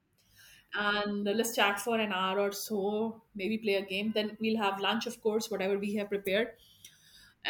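Nothing stood out on listening to this recording of speech.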